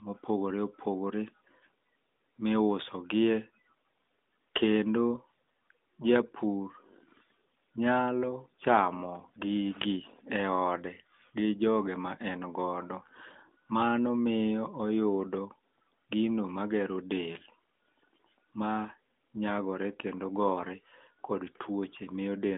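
No technical faults are audible.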